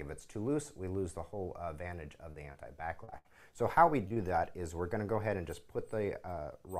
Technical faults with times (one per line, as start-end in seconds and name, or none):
2.31-2.56 short concealed packet loss
3.04-3.14 short concealed packet loss
3.18-3.27 burst of packet loss
4.09-4.18 short concealed packet loss